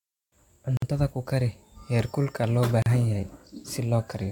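At 0.77 s, a 52 ms silence cuts into the speech just before "ku kari heerkulka loo". A second, 38 ms gap follows at 2.82 s, right after "ku kari heerkulka loo". Both are a gap at a join of encoded pieces, spaced 2.0 s apart. Each piece kept its encoder start delay and end padding. The edges are smeared, and the speech resumes where it stopped.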